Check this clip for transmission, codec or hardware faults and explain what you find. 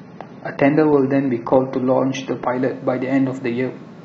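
One fault is present: the speech opens on an adaptive stream starting at a low bitrate. From 0 to 2.55 s the sound is dull and smeared, with nothing above 6.3 kHz and heavier codec artefacts, which fits an AAC stream of around 24 kbit/s. The player began on a cheap version to start fast, then switched to a better one, likely near 96 kbit/s. Quality jumps at 2.55 s with no gap or repeat, unlike a rebuffer, and unlike a fixed low-pass filter, which would dull the whole clip.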